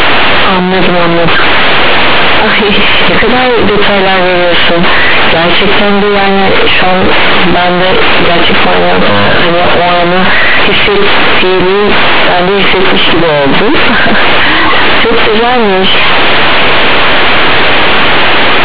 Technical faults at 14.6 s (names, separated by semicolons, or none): companded audio read as linear